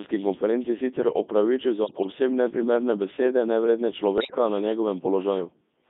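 From start to finish the speech passes through a Codec 2 vocoder, with heavy damage. Its robotic, buzzy quality and band of 200 Hz to 3.6 kHz fit the codec's top 3.2 kbit/s mode. Only pitch, voicing, energy and spectral envelope survive, and the decoder rebuilds the voice from sine waves. Bit errors on digital voice radio strike from 1.84 to 2.12 s, between "konferenci sicer opravičil" and "neprimerne besede nevredne", and again from 4.18 to 4.38 s, just after "neprimerne besede nevredne". Corrupted frame parameters make the synthetic voice jump in pitch, level and tone colour, breaking into warbles and bleeps. The damage suggests several percent of bits flipped across a run of frames.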